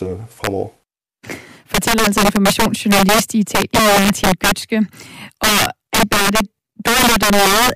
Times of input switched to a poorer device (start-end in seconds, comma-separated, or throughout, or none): none